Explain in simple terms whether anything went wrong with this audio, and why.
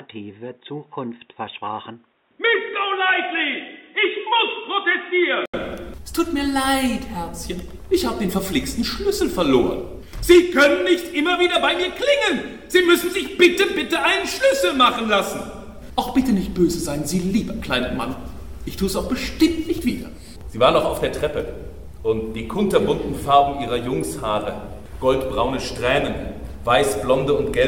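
Something went wrong in the first 5.54 s. The sound there is dull and muffled, with nothing above 3.8 kHz. It is slightly quieter and carries its own faint background noise. An 80 ms gap follows, then it clears. The likely cause is an input switched to a poorer device.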